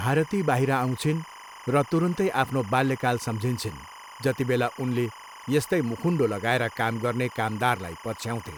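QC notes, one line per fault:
Throughout, timecode bleed. A chirping, warbling buzz sits steadily behind the speech, roughly 20 dB below it. It is linear timecode leaking in from a neighbouring track or cable. The code is a square wave that flips between two pitches, around 1 kHz and 2 kHz, depending on the bits it carries. The pattern repeats 25 times a second, once per frame. That fast, regular switching gives the busy chirp.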